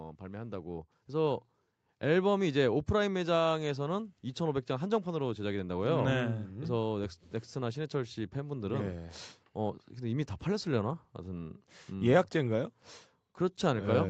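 The automatic gain control in this speech recording judged the input too quiet and raised its gain step by step, twice: from 0.19 to 2.38 s by about 6 dB, and again from 7.59 to 11.7 s by about 4 dB. Because the gain acts on everything picked up, the voice and the background noise swell together over those stretches rather than jumping, while the call path's 8 kHz ceiling stays fixed throughout.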